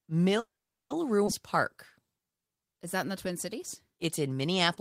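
A call audio freeze, most likely caused by packets stalling in transit until the jitter buffer ran dry, interrupts this short speech recording at 0.39 s. From then until 0.92 s the receiver has nothing new to play, so it stretches the last sound briefly into a fading buzz and then falls silent for about 440 ms. When the delayed packets finally land, the speech resumes exactly where it stopped, so roughly half a second of gap has been inserted without any content being lost. At 1.26 to 1.29 s the opposite happens: a stretch of audio was discarded, either in transit or by a buffer shedding its backlog, while later audio was already queued. The result is a skip ahead, where playback jumps forward across a join of only about 10 ms and roughly 150 ms of speech simply disappears, its two sides butted almost directly together. Finally, from 2.02 to 2.78 s a jitter buffer slow-down sets in as the receiver rebuilds its reserve by repeating individual pitch periods and slivers of pause over and over. 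That adds 144 ms to the passage, which therefore plays at 82% speed with unchanged pitch, leaving sounds drawn out.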